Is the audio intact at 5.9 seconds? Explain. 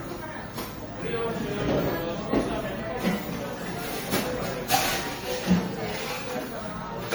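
No. At 5.9 seconds, as throughout the clip, there is generation loss: the sound is swirly, smeared and hollow, with blurred attacks. The likely cause is repeated lossy re-encoding, about five passes, each requantising on a shifted frame grid, consistent with AAC-LC at around 64 kbit/s.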